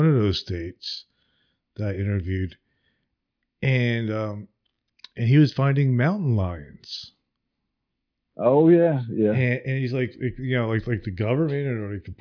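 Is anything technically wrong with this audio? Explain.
No, there are no technical faults.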